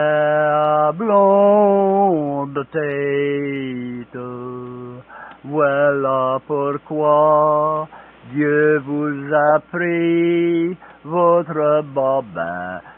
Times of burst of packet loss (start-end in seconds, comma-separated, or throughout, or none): none